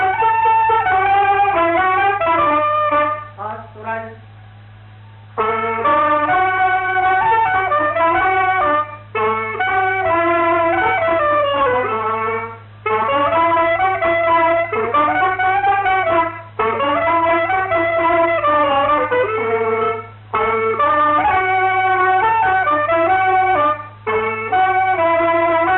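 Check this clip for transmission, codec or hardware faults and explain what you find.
No transmission, codec or hardware faults detected.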